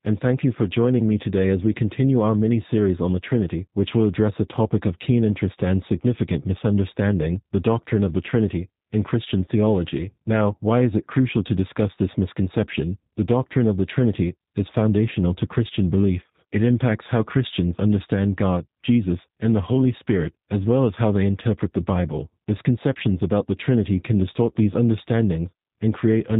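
From start to finish, the speech carries plainly audible G.729 codec damage. The sound points to the G.729A variant at 8 kbit/s. The coder does not store the waveform. It sends a vocal tract filter shape, a pitch predictor and a few pulses per frame, and the decoder rebuilds speech from them. Everything above 4 kHz is gone. The speech sounds muffled, slightly rough and synthetic.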